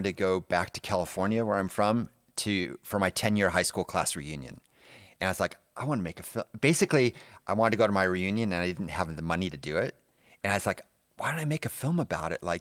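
No technical faults can be heard in this recording.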